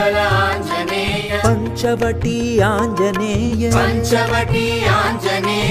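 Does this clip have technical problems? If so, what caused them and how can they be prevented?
Yes. From 0.49 to 1.97 s there are periodic USB or driver dropouts: roughly four ticks, one every 0.5 s, where about a millisecond of audio drops to silence. Stop background tasks from hogging the USB bus or driver, or use a larger buffer.

There is also AAC frame loss with concealment at 1.20–1.32 s (85 ms, fitting two lost frames) and 3.47–3.53 s (43 ms, fitting one), where the decoder smears in guessed sound. Use a more reliable transport or add error protection so frames aren't lost.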